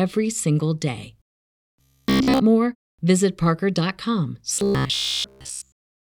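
Robotic sound from repeated short buffers appears from 1.81 to 2.40 s and again from 4.54 s to the end: the speech collapses into a rigid metallic buzz near 66.7 Hz, likely from a single 15 ms chunk being replayed continuously while incoming audio is skipped.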